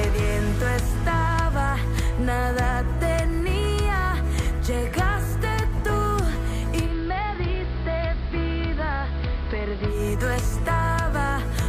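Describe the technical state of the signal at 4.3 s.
Nothing is wrong with the signal at 4.3 s; the audio there runs intact, with no dropout, distortion or discontinuity.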